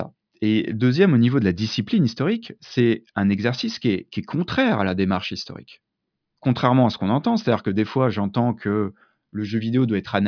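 Listening through the speech, nothing stood out as a technical problem at any point.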